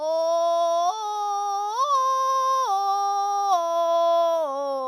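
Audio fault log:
No fault is heard anywhere in this music.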